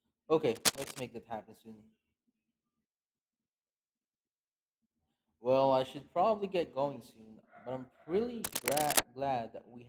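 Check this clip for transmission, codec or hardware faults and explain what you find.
Two bursts of cable scratch noise show up in this speech clip, from 0.55 to 1.04 s and from 8.44 to 9.00 s. The likely cause is a worn cable or connector being moved, so its contact resistance flickers. Each time, that adds a dense, uneven rustling scratch roughly as loud as the speech.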